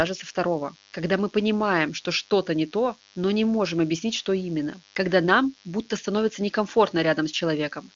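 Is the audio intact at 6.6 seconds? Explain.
No. At 6.6 seconds a steady, thin buzz sits under the speech, well below it at around 30 dB down, with a pitch of 100 Hz and a bright edge from many harmonics. It is DECT cordless phone buzz, present for the whole clip rather than only at this moment. A nearby DECT handset or base sends a radio burst every 10 ms, and the audio circuitry rectifies those bursts into an audible 100 Hz tone.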